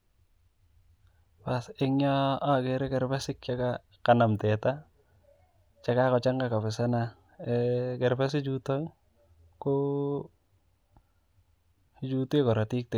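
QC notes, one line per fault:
No technical faults are audible anywhere in the speech signal.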